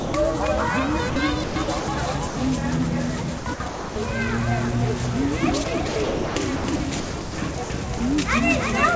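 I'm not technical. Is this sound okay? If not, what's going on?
No. Three things went wrong.

The first is a doubled audio track. The same sound was likely mixed in twice, with a second copy trailing the original. Throughout the clip you hear everything again about a third of a second later, a little quieter. It isn't a natural echo from a room. It's a flat, exact repeat.

The second is sound dropped by the voice detector. The sending side's detector likely mistook parts of the sound for background and briefly stopped sending, so the receiver filled the gaps with artificial hiss. The real sound vanishes into steady noise at the very start, from 0 to 0.14 seconds, then at 1.10 to 1.16 seconds, 2.28 to 2.36 seconds, and 7.98 to 8.00 seconds.

The third is sound chopped by the voice detector. Here the same detector likely flipped on and off repeatedly, so over a stretch the sound keeps cutting in and out. 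This happens from 1.44 to 1.88 seconds, 3.38 to 3.96 seconds, and most heavily from 5.64 to 7.70 seconds.

The call connection itself is working as designed, though it carries nothing above 8 kHz, so the sound lacks its highest sparkle.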